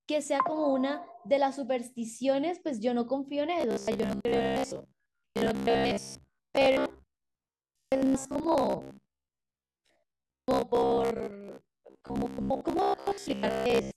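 From 3.61 s right through to 13.96 s you get robotic sound from repeated short buffers: a rigid, metallic buzz near 66.8 Hz that still roughly tracks the speech. Most of the audio is being replaced, likely by a stalled stream looping the last buffer of about 15 ms.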